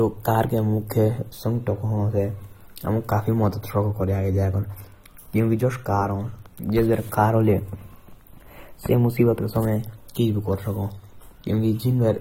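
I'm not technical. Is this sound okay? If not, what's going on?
No. Throughout, the speech sounds dull and smeared, with a fizzy, warbling edge on hissy sounds and nothing above 16 kHz. This is AAC compression, likely squeezed hard to save space, which throws away fine detail and leaves holes in the frequency range.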